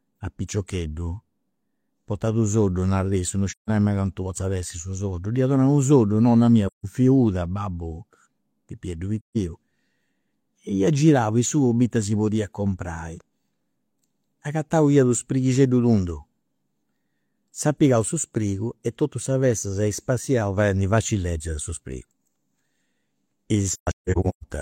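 AAC frame loss with muting hits at 3.51 s after "issu no", 6.67 s after "soddu nonna mia", and 9.19 s. Each is a soft-edged gap of about 0.17 s where the decoder zeroed the missing frames' spectrum and the overlapping windows faded the speech out and back in. From 23.71 to 24.44 s, about 0.51 s of audio is lost in scattered holes, the longest roughly 0.15 s.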